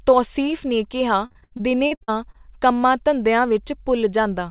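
Speech recorded over a narrowband call link shows repeated packet loss (robotic sound) from 1.26 to 2.46 s. Packets went missing or arrived late about ten times in that stretch, and the receiver covered each hole by stretching out the last good audio. The concealment fills roughly 340 ms, close to a third of the span, and the longest gap is 72 ms. The speech turns choppy, with pieces dropped. The call path cuts everything above 4 kHz, which fits G.711 telephone coding.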